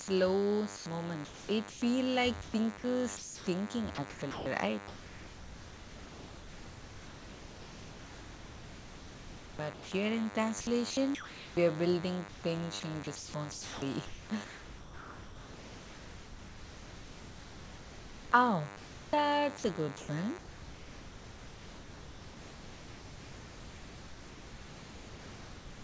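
A thin, steady buzz runs under the speech for the whole clip, pitched at 100 Hz and rich in harmonics, sitting roughly 10 dB below the speech. This is DECT cordless phone buzz. A nearby DECT handset or base transmits a short radio burst every 10 ms. The audio circuitry rectifies those bursts, turning the 100 Hz burst rate into an audible tone with a harsh, many-harmonic edge.

At 0.02 to 0.08 s, the sound gives way to steady synthetic noise for 60 ms before the speech resumes. This is sound dropped by the voice detector. The sender's voice activity detection likely mistook the opening sound for background and stopped transmitting. The receiver filled that 60 ms gap with generated comfort noise until the detector triggered again.

From 0.77 to 1.82 s the speech turns choppy. Pieces of sound vanish into comfort noise, about 450 ms in total. The same sound chopped by the voice detector returns at 2.42 to 9.92 s, where about 5.7 s is replaced. 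It recurs at 10.61 to 11.57 s, with about 540 ms replaced. It appears once more from 12.29 s to the end, where about 10.8 s is replaced. In each stretch the detector likely switched between sending and not sending more than once. Each time, quiet syllables and word edges were swapped for generated noise.

The call path's G.722 codec, at a rate that fits 64 kbps, leaves nothing above 8 kHz. The room noise sits about 31 dB below the speech.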